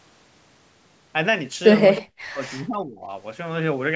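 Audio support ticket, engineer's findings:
Echo leak, 1.96–2.0 s. Likely an echo canceller on the far end's loudspeaker leg failing to remove all of what its microphone picked up, so the residual is returned to this side. Heard as a brief scrap of delayed voice, about 312 ms behind the original and roughly 20 dB below the main speech, short and clipped rather than a sustained repeat.

Speech suppressed in double talk, 1.99–3.1 s. Likely the echo canceller misjudging simultaneous talk from both ends as loudspeaker echo and attenuating everything. The talker's level drops sharply, at its deepest around 40 dB, with roughly a second of speech affected in total across that span, while the other side speaks, directly on the heels of the leaked echo.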